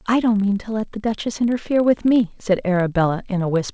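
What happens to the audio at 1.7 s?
At 1.7 s the filter restarted on every block leaves a 25 Hz buzz of small ticks that tracks the speech level and persists throughout; the waveform shows spikes, the spectrogram faint vertical lines, every 40 ms.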